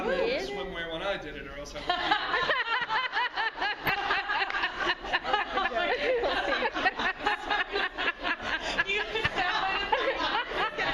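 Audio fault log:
3.87–4.26 s, DAB burbling: weak reception let bit errors slip past error correction into the MP2 data, corrupting samples and scale factors across what fits about 17 frames, so single sub-bands leap in level frame by frame, heard as short blips of noise over the sound.
7.00–7.16 s, DAB burbling: a shorter burst of the same kind, suggesting an error rate near a fifth of a percent, spanning about 8 frames and giving brief blips of noise.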